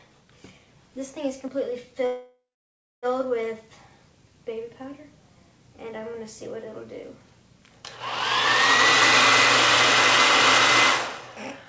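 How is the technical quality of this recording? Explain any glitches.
Two timing glitches interrupt the audio, which has no content above 8 kHz, consistent with a G.722 wideband call codec.

Call audio freeze, 2.06 to 3.06 s: packets were most likely stalled in transit and the jitter buffer emptied, so the last sound trails off into silence for about 0.6 s before continuing with nothing lost.

Jitter buffer speed-up, 11.21 to 11.65 s: to shed excess buffered delay, the receiver cut out tiny pitch-period slices, about 70 ms in total, so this stretch plays at 112% speed with unchanged pitch.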